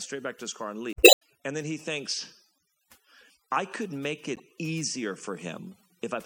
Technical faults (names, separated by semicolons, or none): overdone noise removal; damaged data in a compressed stream